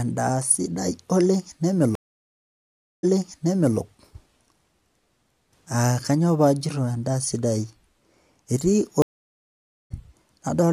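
Speech with two stream reconnects, each a break in the connection followed by a new decoder picking up mid-stream. From 1.95 to 3.77 s the audio drops out for about 1.08 s, then resumes 0.74 s earlier, repeating material as the server resends a burst. From 9.02 to 9.92 s a silence of about 0.88 s ends with playback resuming roughly 0.7 s later, so that stretch of speech is skipped, as with a live stream.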